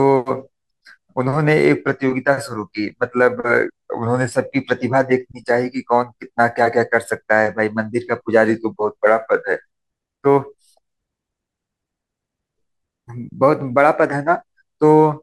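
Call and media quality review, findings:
Speech slows and drops in pitch, then snaps back: 3.67–4.33 s and 8.47–9.65 s, playback about 6.3% slow, pitch down 112 cents. 13.14–14.12 s: reverse step, 6.3% fast, up 105 cents. Likely cause is a drift correction step in the clock-matching resampler, which changes rate in one jump to refill or drain its buffer and then restores it. The resulting sudden detuning is roughly a semitone.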